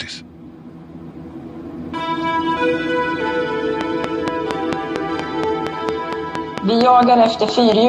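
A train of clicks, 3.81 to 7.73 s: about twenty evenly spaced pops at 4.35 per second, far above the sound, likely from electrical interference.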